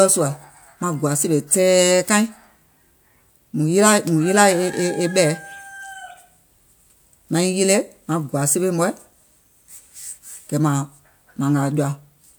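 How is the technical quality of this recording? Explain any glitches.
Nothing stood out as a technical problem on listening to this speech recording.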